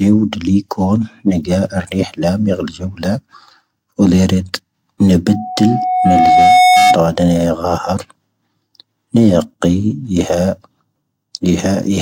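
A single steady tone near 736 Hz creeps in under the speech at 5.27 s, swells over about one and a half seconds into a piercing squeal that ends up roughly 5 dB louder than the speech, and stops at 7.01 s. This is loudspeaker feedback squeal. The microphone was picking up the loudspeaker it was feeding, and at 736 Hz the loop gain rose above one, so that frequency kept reinforcing itself until it stopped.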